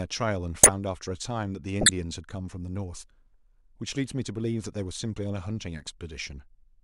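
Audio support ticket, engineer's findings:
Loud squeaky noise bursts at 0.61–0.70 s and 1.81–1.89 s, error peaks around -5 dBFS. Corrupt frame decoded: codec decoder played a few bit-damaged frames, misplacing spectral energy.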